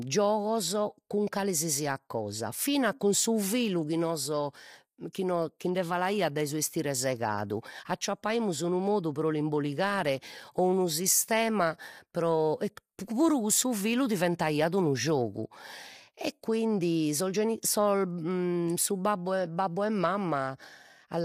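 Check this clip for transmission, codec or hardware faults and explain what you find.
One codec fault runs through the whole speech clip: low-delay AAC compression. It is plainly audible from start to end. The voice sounds rough and grainy. Noise fills the gaps between pitch harmonics. The cause is likely AAC-ELD, the low-delay codec of video calls. Its short frames resolve harmonics poorly and spend bits quickly. The damage fits a bitrate around 32 kbps.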